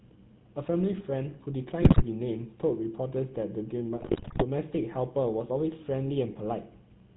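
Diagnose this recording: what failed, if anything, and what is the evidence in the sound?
Codec stage: GSM full-rate codec throughout, with buzzy, gravelly speech and no content above 4 kHz, consistent with 13 kbps pulse-excited vocal-tract modelling.

Network stage: GSM bit errors at 1.82–2.03 s and 4.0–4.44 s produce squawks, pops and gargling as corrupted filter, pitch and gain parameters distort decoded frames.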